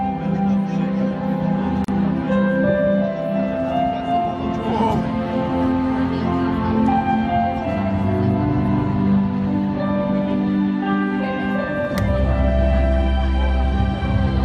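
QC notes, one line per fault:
1.84–1.88 s, gap at a join of encoded pieces: a gap of about 39 ms, its silent part shortened by the codec's smeared edges, where two separately encoded chunks meet untrimmed, then the sound carries straight on.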